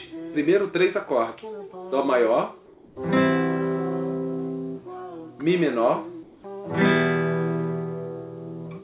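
From 2.66 to 2.96 s and again from 6.23 to 6.44 s, the background becomes a steady, featureless hiss: comfort noise in place of the background, about 2 dB quieter the first time. This is likely discontinuous transmission, with the receiver synthesising noise while the sender paused, all within a band ending at 4 kHz.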